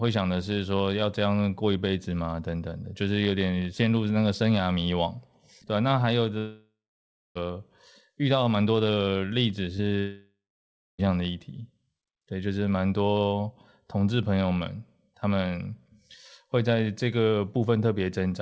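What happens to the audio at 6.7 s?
From 6.38 to 7.37 s the sound stretches into a fading buzz, then silence; likely a long network dropout, the receiver padding the lost second.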